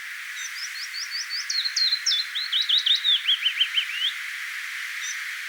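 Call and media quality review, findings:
No faults found in this clip. Nothing heard needs follow-up on the call or media path.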